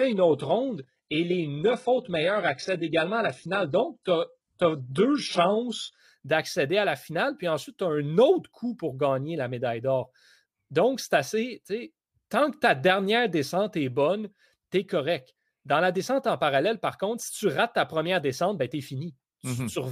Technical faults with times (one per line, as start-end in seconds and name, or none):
0.00-6.00 adaptive stream starting at a low bitrate